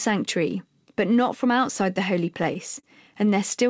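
Just after "from outside the holy", from 2.32 to 2.85 s, the speech shows repeated stalls (stutter). Packets arrived late, the jitter buffer kept running dry, and the receiver stretched the last sound five times, about 72 ms in all, with nothing lost. The longest hold is 35 ms. It sounds like brief hitches and drag. On a spectrogram, already empty above 8 kHz from the G.722 call codec, short stretches show frozen, smeared harmonics, and the waveform shows repeated copies of the same cycle.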